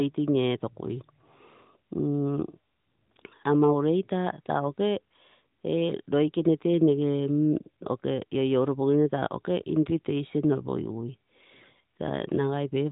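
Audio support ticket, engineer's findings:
Findings: no audio fault found in this speech clip.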